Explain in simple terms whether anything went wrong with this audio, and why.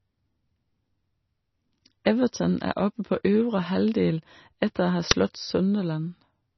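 Throughout, the speech sounds watery and swirly with nothing above 6 kHz, likely from heavy MP3 compression; unlike simple muffling, the sound also warbles and shimmers.

At 5.11 s there is a brief crack lasting about 5 ms. It comes from an uninitialised buffer, where leftover memory was played as sound, which fits a 256-sample block. Unlike a dropout, it adds noise instead of leaving a gap.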